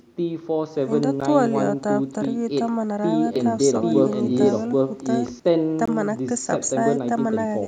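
At 1.21 s the speech drops out for a moment: a block of digital silence, about 10 ms of zeros where the output buffer apparently wasn't filled in time. Because the signal jumps straight to nothing and straight back, with no fade either way, it comes across as a sharp tick rather than a gap you'd notice as a pause.

From 3.36 s to 5.40 s there's a doubled audio track: a second copy of the speech running roughly 0.7 s behind, at about the same level as the original. It's likely the sound was picked up a second time through a slower path and mixed back in. It sounds like a dry, full-band echo with no room tail on it, and it cuts in and out abruptly at both ends.

At 5.86 to 5.88 s there's another block of digital silence, this one 20 ms long. That's long enough to hear as a brief hole in the speech.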